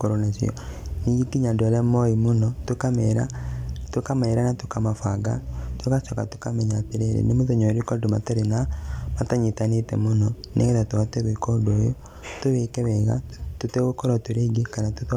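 Listening to this speech recording, nothing technically wrong stood out at any point.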